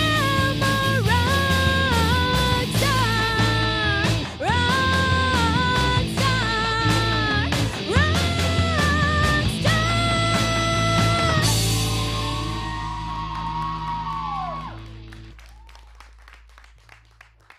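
Nothing stood out as a technical problem on listening to this audio.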